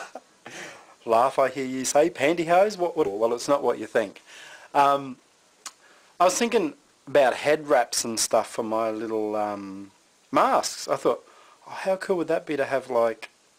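Skip ahead at 3.05 s: roughly a second of audio was dropped, and playback jumped forward with no gap or fill. The two sides of the missing stretch are joined almost directly, so the sound lurches abruptly forward.

Jitter buffer speed-up from 3.15 to 6.96 s: the receiver was holding more delay than it wanted and trimmed repeated short pitch-period slices, about 0.4 s in total. The sound runs at 111% speed with unchanged pitch and comes across as hurried.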